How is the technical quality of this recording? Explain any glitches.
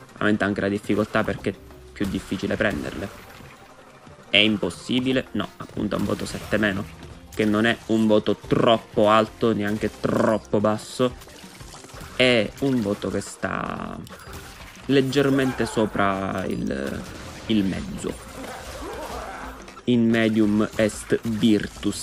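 Two brief glitches stand out, at 1.14 s and 20.13 s. Each is a single sharp click, most likely from dropped samples. A fraction of a millisecond of the stream goes missing, so the waveform steps abruptly to a later value. Unlike a dropout, no sound disappears and no gap is heard. There is only the instantaneous tick.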